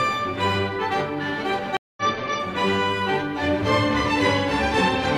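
The audio drops out at 1.77 s for about 203 ms and returns at 2.03 s, which points to a stream reconnect. The connection broke, playback fell silent, and the player re-established the link and started a new decoder partway through the stream. When the sound resumes it has jumped ahead by roughly a fifth of a second rather than picking up where it stopped, so that stretch of audio is missing, as happens when a live stream is rejoined.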